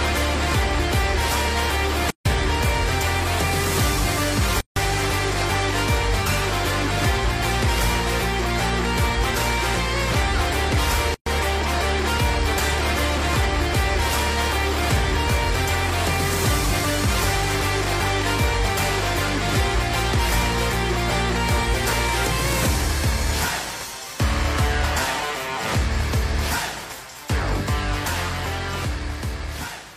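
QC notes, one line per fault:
2.10, 4.61 and 11.14 s: gap at a join of encoded pieces. Silences of 150, 156 and 121 ms open, their edges smeared. Untrimmed encoder delay and end padding remain at each join.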